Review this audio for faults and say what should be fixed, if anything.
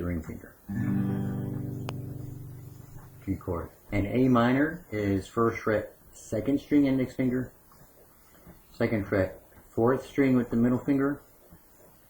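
A steady, thin hiss sits under the whole clip, brightest at the top of the band and roughly 30 dB below the signal. It is low bit depth with noise shaping. The audio has been reduced to very few bits, which fits a 9-bit word length, and the rounding error has been pushed upward in frequency rather than spread evenly, so it gathers as bright hiss. Keep the full bit depth through every stage and reduce word length only once, at final delivery, with suitable dither.

A single sharp pop lands from 1.89 to 1.91 s and peaks around 10 dB above the surrounding sound, which continues underneath it. This loud pop comes from a brief step or pulse of voltage entering the signal path, most likely from a connector, a switch or static, and the circuitry after it shapes that pulse into a short burst. Secure connections and avoid switching or handling equipment while recording or playing back.

At 3.67 to 3.71 s the sound jumps abruptly forward with a small blip, and a second or more of the programme is simply absent. 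This stream segment skipped is likely caused by one segment of a segmented stream failing to load, with the player moving straight on to the next one instead of waiting or retrying. Give the player enough buffering and retry failed segment requests before skipping ahead.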